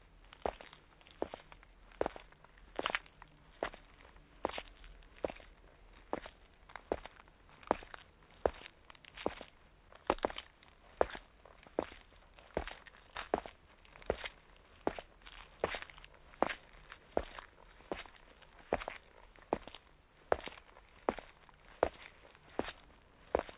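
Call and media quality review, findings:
No call or media quality issues found in this audio.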